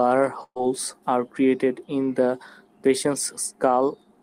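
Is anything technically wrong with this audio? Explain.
Yes. From 0.43 to 0.60 s, just before "are created in the", there is a burst of packet loss. About 120 ms of speech never arrived. The receiver held the last sound and faded it, then fell silent briefly. Speech resumes with that part missing.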